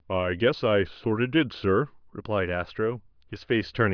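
Nothing in this bit of speech stands out as a technical fault at any point, so there's nothing to pin to a timestamp here.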